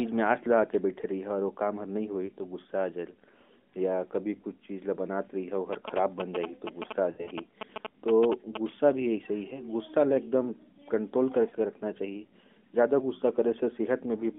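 At 2.26 s a single lost AMR speech frame causes a brief warble. Radio errors corrupted about 20 ms of data, so the decoder repeated the last good pitch and vocal tract settings at reduced gain. Unlike a click or dropout, the gap is smeared over with a continuation of the preceding sound.

From 5.73 to 8.57 s, GSM signalling bursts from a nearby 2G phone produce a galloping dit-dit-dit of short 217 Hz buzzes, nearly as loud as the speech. The audio circuitry rectified the phone's radio bursts. Their steady mechanical rhythm, unrelated to the speech, separates them from the decoder faults.

Within that stretch, from 7.12 to 7.31 s, lost frames recur: about 120 ms scattered over 160 ms, with the longest run lasting 60 ms. The sound drags and sags toward silence, then returns briefly rough.

At 11.50 s another single lost frame leaves a short dip.

Throughout, the AMR narrowband codec confines the audio to roughly 200 Hz to 3.5 kHz, with only light synthetic colouring.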